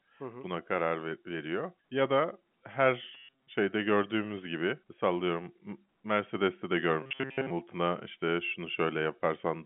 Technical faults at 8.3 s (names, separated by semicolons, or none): none